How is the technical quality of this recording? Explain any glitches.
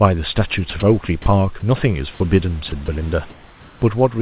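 The recording has brief dropouts. It comes through a narrowband call path with nothing above 4 kHz, which fits a G.711 link, and the room noise sits about 32 dB below the speech.

Sound dropped by the voice detector, at 0.70–0.72, 0.80–0.82, 1.22–1.26, 2.70–2.72 and 2.86–2.88 s. These 20–40 ms gaps are likely the sender's voice detector mistaking sound for background and substituting comfort noise. The speech briefly gives way to steady noise or near silence. On a spectrogram these show as narrow vertical strips where harmonics vanish into flat, low-level noise. On a waveform they show as sudden dips in amplitude.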